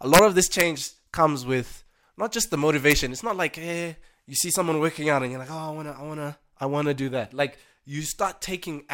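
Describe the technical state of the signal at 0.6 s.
Integer overflow at 0.60 s: for a few milliseconds a loud peak in the speech pushed the sample value past the largest integer the format can hold. Because the value was not limited at full scale, it wrapped straight round to the opposite extreme, so the waveform jumps across the entire range in one step. The overdrive is only about 0 dB, barely past the limit, yet the wrap still produces a violent crack, far sharper than ordinary clipping.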